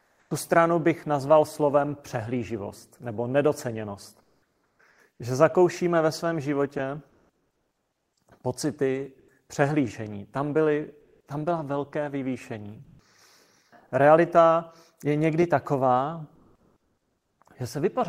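In the pauses of this speech, comfort noise replaces the background at 0.0–0.30, 4.22–4.79, 4.90–4.98, 7.09–8.16, 9.19–9.28, 11.00–11.26 (before "tam byla velké vyvýšení"), 12.84–12.99 and 16.35–17.39 s. Steady, featureless hiss stands in for the real room sound, likely from Opus discontinuous transmission. It sits about 5 dB lower in the early gaps and up to about 10 dB higher later.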